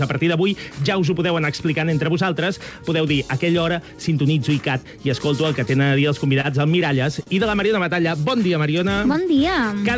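Brief ticks, smears and small hiccups break up the sound from 6.41 to 8.06 s, about five of them, the longest around 40 ms. These are scattered short gaps: packets went missing or arrived late, and the receiver filled each hole, roughly a tenth of a second in total, by extending the preceding sound. From 8.01 to 9.81 s the audio drags, running at 97% speed with no change in pitch, so sounds seem stretched. This jitter buffer slow-down adds 69 ms as the receiver rebuilds its reserve by repeating single pitch periods and fragments of pauses. Across the clip, the call path leaves nothing above 8 kHz, which fits the G.722 codec.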